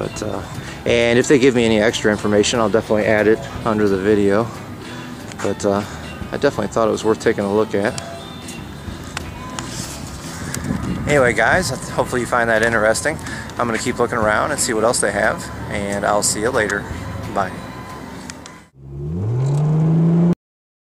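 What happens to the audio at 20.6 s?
At 20.6 s the audio is already gone: this is a cut-off end, where the final buffers were never written or played out. The sound stops abruptly at 20.33 s, mid-sound and without any natural decay, and pure digital silence runs from there to the end.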